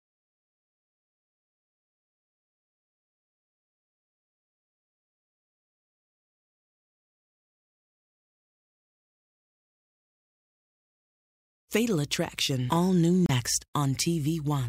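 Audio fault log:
13.24–13.30 s, damaged data in a compressed stream: a brief glitch about 64 ms long, as the decoder hits corrupted bytes, misreads or discards the affected frames, loses sync and hunts for the next valid frame header.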